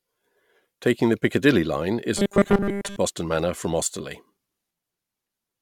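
From 2.17 to 2.96 s the speech turns into robotic sound from repeated short buffers: a rigid, metallic buzz at 200 Hz that still loosely tracks the talking. This is likely caused by audio arriving too seldom, so the last 5 ms chunk is replayed to fill the gap while most of the real signal in that stretch is skipped. A waveform shows short repeated patterns across much of the span, and a spectrogram shows flat, evenly spaced harmonics of 200 Hz.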